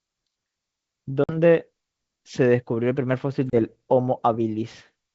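At 1.24 s and again at 3.50 s the speech drops out for 50 ms and 30 ms, a handful of packets each time, then returns with brief distortion. This is packet loss on an ADPCM call: the decoder's predictor and step size drift from the sender's until resynchronised.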